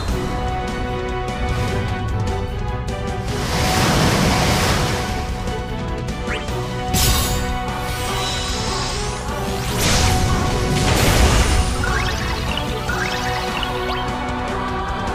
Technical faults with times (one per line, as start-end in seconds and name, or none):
none